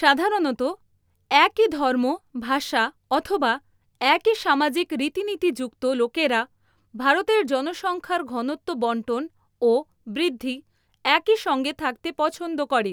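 Listening closely to the speech, nothing stood out as a technical fault at any point.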